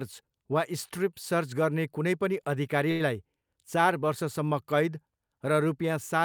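At 2.91 s the speech hangs briefly in a short stall from a late packet, lasting until about 3.02 s. The packet due at that moment arrived late, the jitter buffer drained, and the receiver filled the gap by stretching the last sound for 86 ms before resuming at the same point. Nothing is lost, but the held sound is audibly drawn out with a slight buzz or dip, and everything after it runs 86 ms later.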